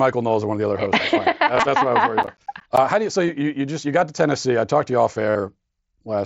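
Speech carried over a wideband mSBC Bluetooth headset link, band-limited to about 8 kHz with light graininess on louder syllables, shows concealed Bluetooth headset packet loss in three places. From 1.55 to 1.63 s, just after "other hosts that's", about 52.5 ms of audio is missing across a 75 ms stretch, with the longest run 22.5 ms. At 3.27 s, just before "you just you got", a 15 ms loss occurs, and from 5.30 to 5.35 s, after "talked to you off", another 52.5 ms is lost. The receiver fills each hole by repeating the best-matching recent stretch of waveform, so the longer runs come through as a brief buzzy held tone with a slight warble as real audio resumes. From 2.23 to 2.78 s there is processor overload crackle. The gaps are consistent with buffers of around ten milliseconds, several of which were not finished in time. Each miss drops in a hard-edged slice of silence, and together the misses produce a gritty tearing over the sound that stops once the load clears.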